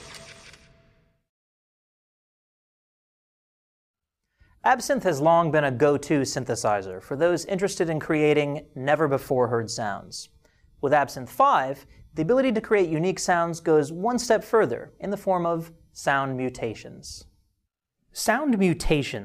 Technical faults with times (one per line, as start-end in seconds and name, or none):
none